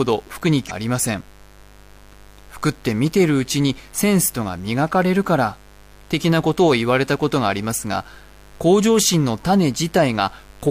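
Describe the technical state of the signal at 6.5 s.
At 6.5 s there's mains buzz under the speech, and it runs the whole clip. Sharp switching spikes from something like a dimmer or rectifier land twice per 50 Hz cycle, stacking harmonics up into the kHz range, so you get a steady raspy buzz sitting roughly 30 dB down.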